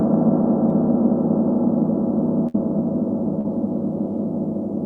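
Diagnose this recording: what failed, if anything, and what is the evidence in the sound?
Network stage, burst of packet loss: from 2.47 to 2.55 s the sound stops progressing and the receiver's concealment stretches out the last received audio for about 67 ms, holding its character and letting it decay in level before real audio returns. About 60 ms of the original is gone, so the sound resumes further along than where it broke off. This is consecutive packets arriving too late or not at all.

Network stage, short concealed packet loss: at 3.41 to 3.45 s a brief smear interrupts the sound, roughly 34 ms of synthesized fill that blends back into the real signal. About 30 ms of original audio never reached the decoder. The band-limited character of the audio around both events, topping out near 12 kHz, points to the Opus codec on this call path.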